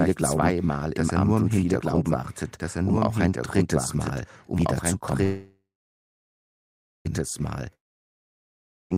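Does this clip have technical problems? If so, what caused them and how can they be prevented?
Yes. A doubled audio track runs throughout: an equally loud, full-band copy trails by about one and a half seconds, likely from a second capture path. On a spectrogram every pattern repeats, undecayed, shifted later. Capture from one source only and mute monitoring returns into the mix.

A call audio freeze runs from 5.23 to 7.07 s. The last sound buzzes briefly, then about 1.42 s of flat silence follows, and the audio resumes without loss. The jitter buffer was likely starved by held packets. A larger adaptive jitter buffer and a steadier network path prevent it.

A long network dropout runs from 7.75 to 8.92 s. A brief fading buzz gives way to a flat waveform gap of about 1.14 s, and about 1.16 s of audio is lost, likely to a network outage. A wired connection or redundant, forward-error-corrected transport prevents it.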